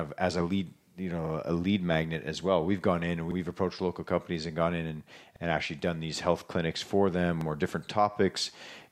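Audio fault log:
3.31–3.36 s, 5.36–5.41 s, 7.41–7.46 s: overlapping chunks. A 50 ms slice replays at each 2.0 s chunk join, producing a regular stutter, first after "we've gone in and".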